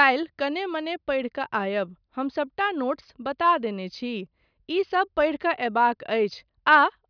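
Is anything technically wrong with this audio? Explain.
No, nothing in this speech recording stood out as technically wrong on listening.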